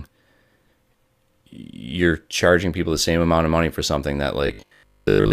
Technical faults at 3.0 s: none

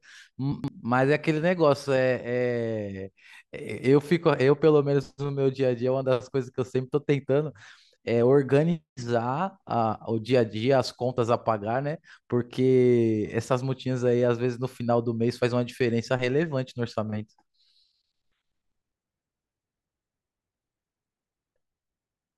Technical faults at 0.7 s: chunks out of order

